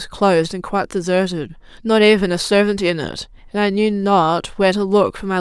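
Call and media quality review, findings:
Nothing stood out on listening to this speech recording.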